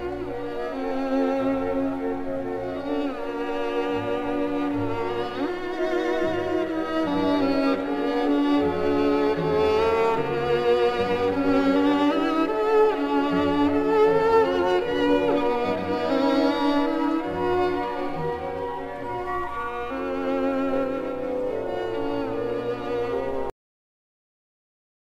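At 23.50 s the audio has a cut-off end. The sound stops abruptly, mid-event, with no natural decay. Silence then runs to the close. The final buffers were never written or played back, so the tail simply vanishes.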